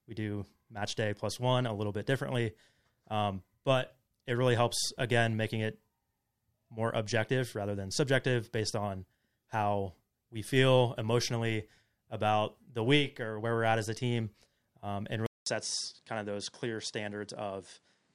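At 15.26 s the speech drops out for 200 ms, then returns through what is likely an input switched to a poorer device, lasting to the end. Nothing above 10.5 kHz survives, so the voice turns duller, sits roughly 5 dB quieter, and carries a new noise floor around 40 dB below it. A spectrogram shows a blank vertical gap, then a hard ceiling at 10.5 kHz; the waveform shrinks slightly after the gap.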